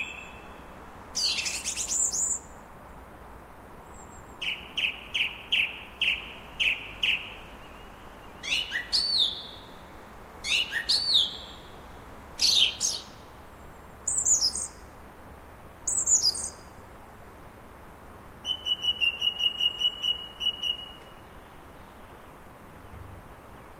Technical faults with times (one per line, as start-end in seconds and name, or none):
none